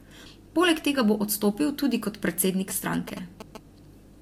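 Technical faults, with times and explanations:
2.70–3.57 s, GSM signalling bursts: just after "bo odstopil tudi kot", a galloping run of ticks and short buzzes at about 217 Hz breaks in, sitting roughly 10 dB below the speech. A 2G phone close to the recording chain was signalling, transmitting brief clusters of radio bursts, and the audio circuitry rectified that RF energy into the signal, turning each burst envelope into an audible click or buzz repeating at the GSM frame rate.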